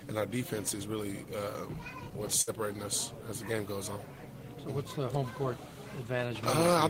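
A burst of packet loss interrupts the audio from 2.41 to 2.50 s. Several consecutive packets never arrived in time, so the receiver stretched the last sound it had for about 57 ms, fading it as the gap continued. Playback then resumes about 60 ms further on, and that stretch of audio is gone. On a spectrogram the fill shows as smeared, flattened bands that dim toward the edge, and the waveform shrinks before an abrupt restart.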